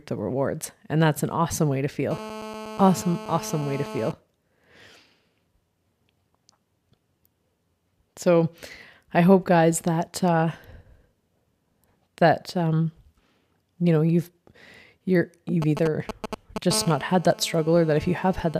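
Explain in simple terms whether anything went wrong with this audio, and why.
A mobile phone on the old 2G network was close to the recording equipment, and the equipment's audio circuitry picked up its radio signal. Two kinds of interference result.

GSM phone buzz: While the phone was on a call, it transmitted in short radio pulses about 217 times a second. The circuitry turned those pulses into sound, producing a harsh, raspy buzz at 217 Hz with many overtones layered on top. This buzz has nothing to do with the speech. It runs steadily from 2.11 to 4.12 s. It returns from 16.73 s until 18.55 s, somewhat fainter than the first time.

GSM signalling bursts: Just before that second buzz, from 15.62 to 16.73 s, the phone was only exchanging brief bursts with the network, the way it does when a call or message is being set up. Each burst leaks into the audio the same way, so instead of a steady buzz you hear a galloping dit-dit-dit of short 217 Hz buzzes. 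These are fairly loud against the speech, and they then give way to the steady call buzz.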